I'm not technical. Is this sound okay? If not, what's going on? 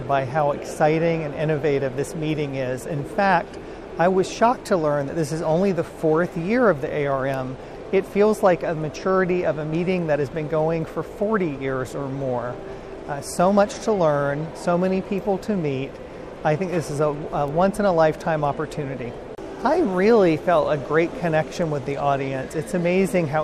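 No. There are two sharp, single ticks, at 7.34 and 17.48 seconds. Each is a bit error spike: one digital bit flipped, briefly throwing the sound off.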